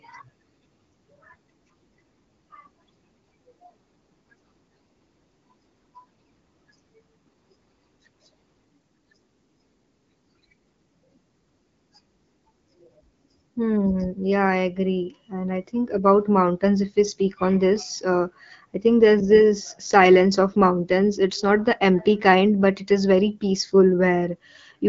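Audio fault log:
Nothing stood out on listening; the speech carries the light, band-limited character of AMR wideband (HD Voice) coding at a rate that fits 12.65 kbit/s, with nothing above about 7.5 kHz.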